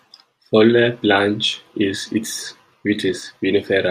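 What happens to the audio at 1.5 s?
Nothing goes wrong at 1.5 s; the audio is intact at that moment, with no dropout, click or other fault.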